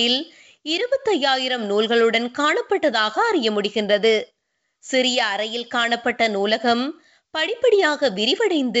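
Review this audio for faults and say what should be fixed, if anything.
Nothing here needs fixing, as no faults can be heard in the speech. It carries the bandwidth of G.722 wideband telephone coding at 64 kbit/s, with the coding's own traces at most faint.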